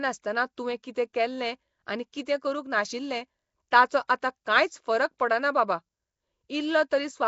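Speech runs throughout with a rough, hissy halo and smeared underwater texture, with nothing above 7.7 kHz; that coarse, noise-filled sound points to the likely cause, Nellymoser compression, at a low rate around 32 kbps. At 4.08 s a brief pre-echo puts hiss just before a sharp attack, spread over about 16 ms and tied to that onset rather than constant like the codec's haze.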